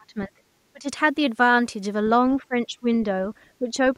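An echo canceller likely mistook the talker for loudspeaker echo while both sides spoke, and turned the voice down. The result is speech suppressed in double talk at 0–0.41, 0.72–0.87, 2.38–2.87 and 3.59–3.73 s, with dips near 25 dB early that ease to roughly 10 dB by the end.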